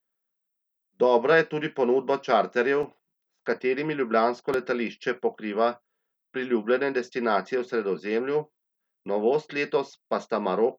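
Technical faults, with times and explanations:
2.83 s and 4.54 s, block of digital silence: the output buffer likely went unfilled in time, so about 3 ms and 2 ms of sound drop to silence with hard edges, heard as brief ticks after "je tudi ponudba čarterjev" and between "katerimi ljubljansko" and "letališče pokriva".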